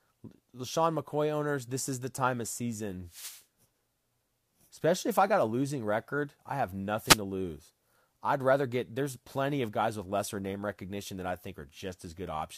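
A short swish of static sweeps across the speech from 3.07 to 3.44 s, and a briefer burst follows from 7.03 to 7.20 s. Both are wireless microphone noise hits. The analogue FM radio link faded as reflected copies of the signal partly cancelled the direct path. With less carrier reaching it, the receiver's own noise rose and washed over the voice for those fractions of a second, until the signal recovered.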